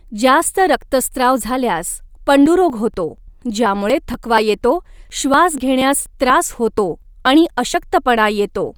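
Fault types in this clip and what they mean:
Bluetooth LC3 compression: throughout, the speech has a breathy, grainy edge and nothing above 20.2 kHz, likely from LC3 coding in 10 ms frames at around 48 kbps.
periodic USB or driver dropouts: from 2.46 to 7.74 s, ticks every 0.24 s where a blocked bus or driver skips roughly 10 ms of audio.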